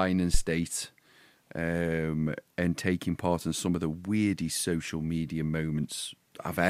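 At 0.34 s a phantom power thump: the supply switching on or off on the live input sends a voltage step through the coupling capacitors, producing a deep thud peaking about -11 dBFS. It decays over about 20 ms, gone by 0.43 s. Unlike a plosive, it comes from the supply, not the talker.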